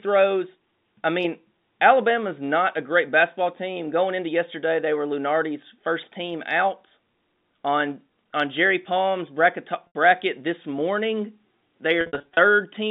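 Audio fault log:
9.87–9.95 s, packet loss with pitch repetition: about 80 ms goes missing just before "this morning", and the last pitch cycle gets looped, giving a brief buzzy hold. That fits eight 10 ms packets.
12.01–12.37 s, packet loss with pitch repetition: 230 ms lost across a 360 ms stretch, longest gap 60 ms, so you hear a run of short stuttery, buzzy holds on the telephone-band sound.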